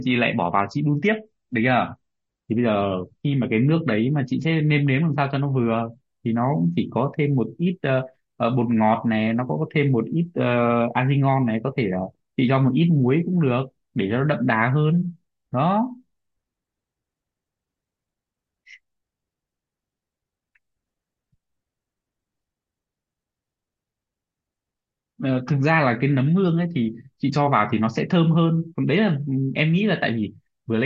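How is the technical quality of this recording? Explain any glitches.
The recording has one clear fault, at the very start. From 0.0 to 6.0 s the speech plays as an adaptive stream starting at a low bitrate. The player opens on a cheap version so playback begins quickly, then switches up once it has gauged the connection. Until 6.0 s the treble sounds dull and swirly with watery artefacts, which fits MP3 at about 32 kbit/s. The sound then abruptly brightens, consistent with 128 kbit/s. On a spectrogram the upper band is empty or smeared until a sharp vertical boundary at 6.0 s. The waveform shows no gap.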